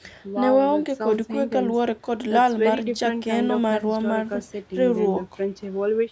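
No technical faults can be heard in this speech clip.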